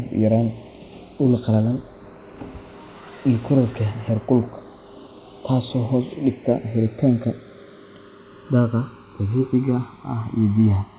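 A slow flanging sweep colours the speech throughout: the channels drifting apart on clocks roughly 150 ppm off, delay creeping to around a millisecond, comb notches gliding.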